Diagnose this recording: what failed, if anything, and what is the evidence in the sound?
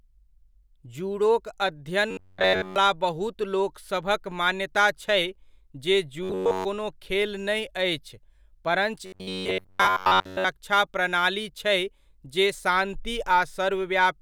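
The driver or buffer stage likely starved, with the software looping a short stretch of about 10.7 ms while fresh audio was dropped, producing robotic sound from repeated short buffers. The speech turns into a rigid metallic buzz fixed at 93.8 Hz, one over that loop length, from 2.11 to 2.76 s, 6.23 to 6.65 s and 9.06 to 10.45 s. Within each stretch essentially all the sound is repeated material that only loosely tracks the speech.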